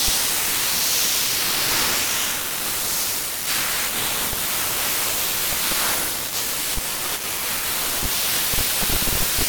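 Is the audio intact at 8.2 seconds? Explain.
No, sample clock jitter is present at 8.2 seconds and throughout the speech. The converter's unstable clock, wobbling by around 10 microseconds, takes samples early or late, so steep, loud passages carry a rough hiss only a few dB below the signal.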